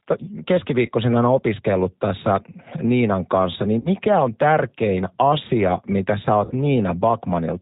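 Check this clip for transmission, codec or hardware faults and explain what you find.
The speech carries G.729 codec damage throughout and three packet-loss gaps hidden by the decoder.

G.729 codec: the whole clip is band-limited below 4 kHz, with a rough, slightly synthetic edge that fits G.729A at 8 kbit/s. Rebuilding each frame from a filter, pitch predictor and sparse pulses causes this. Plain telephone band-limiting would sound dull but not synthetic.

VoIP packet loss concealed by the speech codec: at 0.86–0.91 s, just before "aina opiskellut tässä", about 20 ms is lost, consistent with one packet. At 3.79–3.89 s, between "kanssa niin" and "on tärkein asia mitä", and at 6.45–6.53 s, after "tärkein asia mitä sä", about 60 ms is lost, suggesting three packets. The decoder extends its last pitch and filter at falling gain, giving a fading buzzy tone or coloured noise, and the voice stays weak or distorted after the packets return. 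A plain dropout would be a hard silence or click instead.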